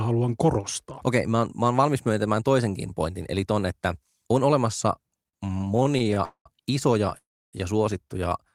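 Just after "ton että on olemassa", from 5.23 to 6.18 s, packets arrive too slowly and the jitter buffer keeps draining, producing repeated stalls (stutter): fifteen short gaps, none longer than 44 ms, are filled by stretching the last sound, so nothing is lost but the speech drags. At 6.24 to 6.47 s there is a call audio freeze, likely from packets held up in transit: 213 ms is inserted, the held sound fading into 90 ms of silence before the speech resumes where it stopped. A second call audio freeze from 7.17 to 7.55 s inserts 355 ms, most of it, 300 ms, silent.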